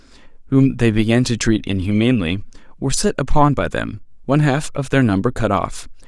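Nothing technical goes wrong anywhere in this bit of speech, so there's no problem to point to at any moment.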